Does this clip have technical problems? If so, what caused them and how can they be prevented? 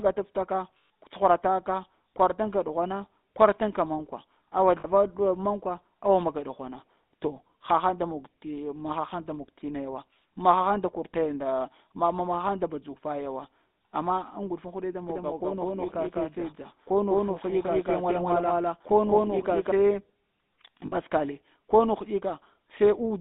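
Yes. GSM full-rate codec, throughout: the speech is buzzy and gravelly, confined to roughly 200 Hz to 3.7 kHz, which fits the 13 kbps GSM full-rate coder's pulse-driven vocal-tract model. Prevent it by using a wideband codec or capturing locally.

Lost GSM frames, at 0.78 to 0.90 s (120 ms), 4.80 to 4.86 s (40 ms) and 20.86 to 20.93 s (about 60 ms): the decoder repeats the last good frame with falling level, producing a brief metallic ring. Prevent them with a stronger radio link or better error protection.

Doubled audio track, 15.10 to 19.72 s: a second full-band copy sits at about equal level roughly a fifth of a second behind, starting and stopping abruptly, likely from a second capture path or an edit leaving two copies overlapped. Prevent it by muting duplicate inputs and checking edits for overlapping copies.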